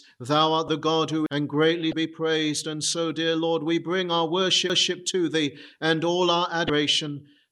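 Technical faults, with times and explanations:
0.68 s, 1.90 to 1.93 s and 6.67 to 6.70 s: damaged data in a compressed stream. Corrupted bytes make the decoder misread frames, lose sync and hunt for the next frame header, so each spot gives a short chirp or blip lasting up to about 30 ms.
1.26 s and 4.70 s: CD skip. The laser jumps to a different turn of the disc's spiral, and the player mutes for only a few milliseconds before resuming elsewhere. Each is heard as a tick followed by an abrupt jump in the sound.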